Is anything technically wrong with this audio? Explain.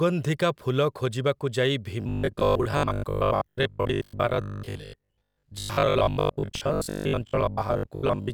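Yes. From 2.01 s, right after "ଫୁଲ ଖୋଜିବାକୁ ଯାଇ", to the end, the speech becomes robotic sound from repeated short buffers: a rigid 50 Hz metallic buzz, which fits a 20 ms buffer, likely being looped for most of the time while fresh audio is skipped. The fixed, steady buzz that follows the words only roughly is what separates it from ordinary dropouts or stutter.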